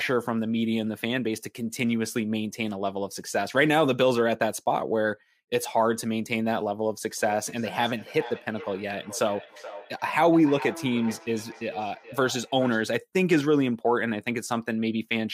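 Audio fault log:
7.17–12.96 s, feedback echo between two devices: the speech returns about every 0.4 s, peaking at about −16 dB, thinning and ringing with each pass. A second device's loudspeaker leaks into the microphone outside its echo canceller's reach, so unlike a single room reflection it repeats.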